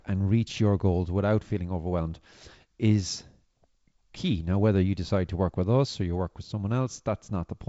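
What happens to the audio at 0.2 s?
Nothing goes wrong at 0.2 s: the speech is intact there, carried through G.722 wideband telephone coding at 56 kbit/s with its content stopping just below 7.7 kHz.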